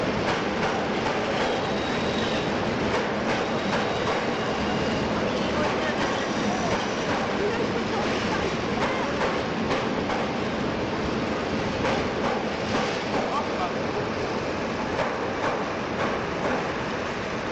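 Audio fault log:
No audible faults detected.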